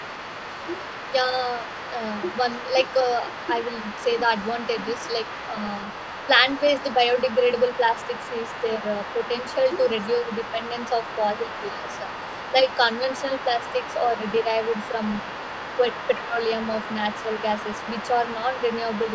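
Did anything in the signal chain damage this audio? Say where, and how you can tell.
Yes. The damage happened in the call processing stage. A second voice sits under the main talker for the whole clip, from 0.0 to 19.1 s, at roughly 15 dB below the speech. This other side's voice leaking through is likely residual echo: the far end played from a loudspeaker reached the microphone, and the echo canceller did not fully remove it. Room reverberation would only smear the talker's own voice. Here a separate voice is present throughout.

The second fault is speech suppressed in double talk. Between 11.69 and 17.29 s the main voice repeatedly dips while the leaked voice is also active. The deepest drop is about 10 dB, and the affected stretches add up to about a second. This is likely the echo suppressor attenuating both voices because it could not tell them apart. A network dropout would produce hard gaps in the audio. 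These are partial dips that coincide with the overlapping voice.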